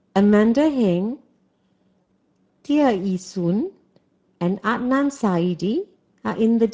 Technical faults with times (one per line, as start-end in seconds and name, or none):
0.00-6.73 Speex codec
2.01-2.07 VoIP packet loss concealed by the speech codec